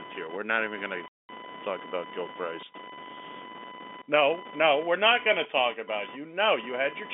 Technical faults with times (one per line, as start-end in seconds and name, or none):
0.00-7.13 computer activity noise
1.08-1.29 packet loss filled with silence